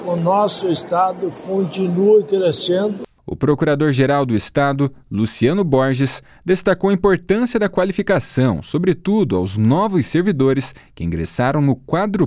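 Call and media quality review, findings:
Nothing to flag here; listened through the whole clip and found no faults worth a ticket.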